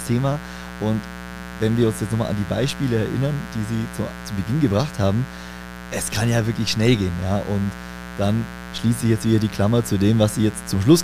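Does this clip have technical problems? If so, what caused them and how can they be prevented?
Yes, there's a steady raspy mains buzz under the speech the whole way through, about 15 dB below the speech. Switching spikes twice in every 60 Hz cycle are stacking up harmonics into the kilohertz range. Shielded cables and keeping dimmers off the recording circuit should stop it.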